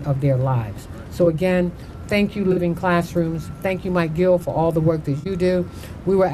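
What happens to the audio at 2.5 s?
From 2.52 to 2.59 s there is a corrupt frame concealed: the decoder detected damaged AAC data and covered it over about 70 ms, which fits two lost frames.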